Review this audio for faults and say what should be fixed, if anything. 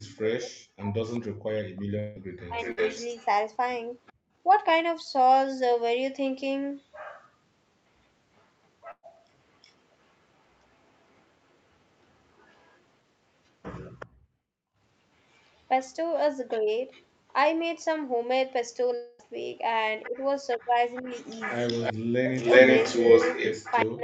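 Speech suppressed in double talk shows up from the start to 2.59 s, briefly at 16.6 s, and again from 20.08 s to the end. The voice sinks by as much as roughly 40 dB, likely because the echo canceller couldn't separate the talker from the far end and ducked both. A canceller with better double-talk detection would keep the near talker open.

Echo leak is there from 1.05 to 4.13 s, faintly from 8.37 to 17.05 s, and strongly from 20.02 s to the end. It's a copy of the voice returning 374 ms late, around 10 dB down at first, barely audible in the middle, and then louder than the speech itself. The cause is likely loudspeaker pickup that the far-end canceller didn't fully remove. Retuning that canceller, or using a headset, would stop it coming back.

Long network dropouts hit at 1.99 to 2.18 s, losing about 160 ms, and at 18.95 to 19.21 s, losing about 240 ms. Each time the last sound is stretched into a fading buzz or hiss, likely because no packets arrived, and the audio picks up again with that stretch missing. 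A steadier network path or stronger redundancy would help.

Bursts of packet loss occur at 2.72 to 2.79 s, with 60 ms gone, and at 8.91 to 9.05 s, with 120 ms gone, 50 ms of which goes silent. The receiver holds and fades the previous sound across each gap. Forward error correction or a slightly deeper jitter buffer would cover these.

Background gated by the echo canceller cuts the room sound by about 38 dB from 4.13 to 4.35 s, and by about 37 dB from 14.07 to 14.79 s. Each time, the canceller clamped the microphone while the loudspeaker played and then released it. Gentler suppression, or comfort noise during those clamps, would hide the holes.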